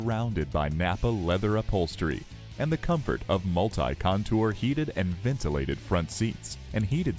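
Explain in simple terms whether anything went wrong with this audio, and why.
Nothing stood out as going wrong on listening to this audio.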